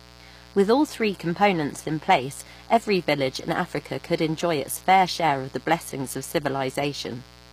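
A steady, raspy mains buzz runs under this speech from start to finish, sitting well below the talker. Its spacing fits 60 Hz mains, with sharp switching spikes from a dimmer, rectifier or missing shield spreading harmonics up to several kHz. The treble is also plainly damaged throughout, with s sounds coming across gritty, metallic or lispy. The likely cause is HE-AAC compression, which rebuilds the top band from copied lower bands so its harmonics fail to line up, and the damage fits a low bitrate near 24 kbps.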